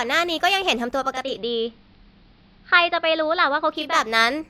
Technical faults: digital radio blending to analogue

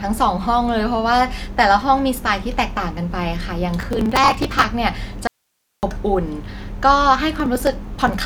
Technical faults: processor overload crackle; audio dropout to a faint residue

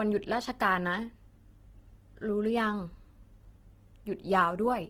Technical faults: Opus compression

